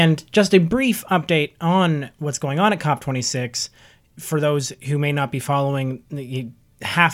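At 0.73 s a sudden gain jump, likely an unramped digital gain change, drops speech and noise about 5 dB together; the waveform steps down.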